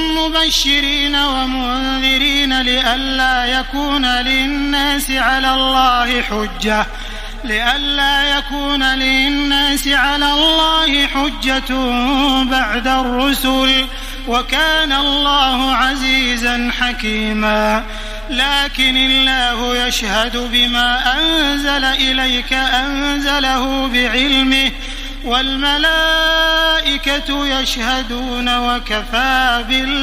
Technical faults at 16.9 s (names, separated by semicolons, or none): none